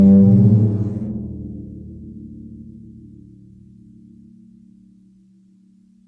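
No technical faults occur at any point in this music.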